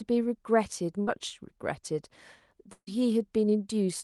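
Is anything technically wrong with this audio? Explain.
Yes, there are two bursts of packet loss, at 1.01 to 1.09 s and 2.73 to 2.89 s. The receiver stretches the last bit of sound to cover each gap, so about 60 ms and then about 140 ms of speech go missing. The second fill fades to silence before the speech picks up again.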